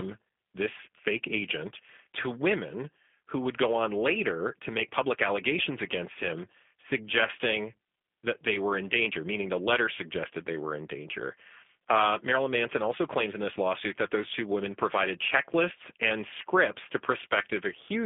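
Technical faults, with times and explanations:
Throughout, G.729 codec: the speech is squeezed into a narrow telephone band, roughly 250 Hz to 3.5 kHz, so it loses both its low body and its upper sibilance. The codec doesn't send the waveform. It rebuilds each 10 ms frame from a vocal tract filter, a pitch predictor and a few coded pulses, which fits an 8 kbit/s G.729A stream. That sparse excitation gives the voice its plainly audible rough, buzzy, synthetic edge.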